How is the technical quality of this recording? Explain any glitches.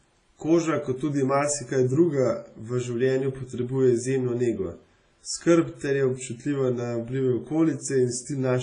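The quality is poor throughout. Heavy WMA compression damages the speech from start to end. It is likely a transform codec at a low bitrate, which fits a 24 kbps stream. Long transform blocks smear quantisation noise across tens of milliseconds. Weak components are zeroed, and nothing remains above 10.5 kHz. The result is ringing and washy, with a hiss that breathes with the speech.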